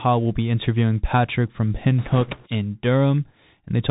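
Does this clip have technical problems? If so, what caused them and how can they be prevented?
Yes. Throughout, the speech has the Bluetooth CVSD headset codec sound, which fits a 64 kbps link: nothing above 4 kHz, scratchy s sounds where loud high content outruns the adaptive step, and a granular hiss underneath, unlike plain band-limiting, which stays clean. Use a wideband (mSBC or LC3) headset profile.

From 1.99 to 2.48 s, bit errors on the Bluetooth voice link, at a rate of a few percent, add a rushing, crackly noise. Each flipped bit nudges the signal only slightly and the error fades, so there are no loud clicks or gaps like those from packet loss. Keep the headset close to the receiver, away from interference.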